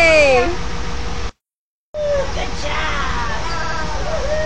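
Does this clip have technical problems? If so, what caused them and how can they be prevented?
Yes. There are two stutters from repeated frames. At 0.65 s a block of about 139 ms plays three times in a row, adding about 279 ms and lasting until 0.93 s. At 3.58 s a shorter block of about 93 ms also plays three times, adding about 186 ms and ending at 3.77 s. The cause is compressed frames that were written or sent more than once, so the decoder replayed them. Deduplicating frames by sequence number or timestamp in the muxer or receiver prevents this.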